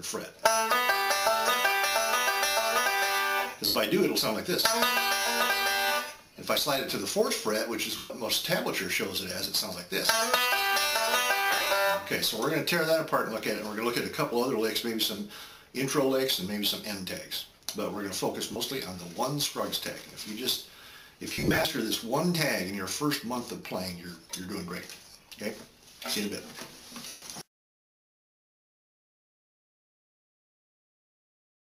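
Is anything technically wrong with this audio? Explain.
Yes. Lost LE Audio frames occur six times: 3.67 s (80 ms), 7.97 s (130 ms), 11.51–11.71 s (120 ms scattered over 200 ms, longest run about 50 ms), 18.52 s (40 ms), 21.33–21.65 s (220 ms scattered over 320 ms) and 27.07 s (150 ms). The LC3 decoder covers each gap by replaying the last spectrum with randomised signs, fading it as the gap lengthens. Tonal content turns into a brief noisy smear that sinks toward silence in the longer gaps. The durations fit 10 ms frames. The lossy-compression coding is light.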